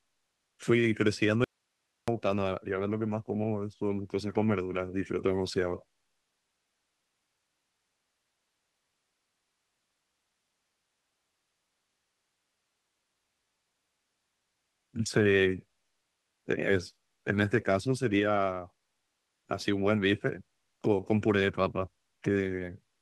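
At 1.44 s the speech cuts out abruptly and stays gone until 2.08 s, an audio dropout to a faint residue lasting about 0.64 s. The gap isn't silent: only hiss remains, sitting roughly 50 dB below the normal signal level, and the speech returns just as suddenly. The likely cause is a momentary loss of the source feed while the downstream path stayed live, passing its own noise floor through the break.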